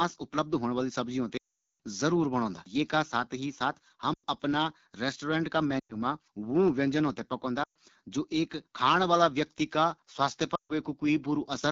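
AMR wideband (HD Voice) codec, throughout the speech: the encoder models the vocal tract and pulse excitation up to 6.4 kHz and fills the top band with shaped noise. Here it runs at a low rate, which fits the 8.85 kbit/s mode, so the speech sounds plainly rough and raspy.

Lost AMR speech frames at 1.38 to 1.77 s, 4.13 to 4.25 s, 5.80 to 5.97 s, 7.63 to 7.75 s and 10.55 to 10.72 s: corrupted frames were concealed by repeating the last good pitch and spectral settings at falling gain. The long first gap drops quickly to near silence. The shorter ones also drop briefly to near silence before the speech returns rough.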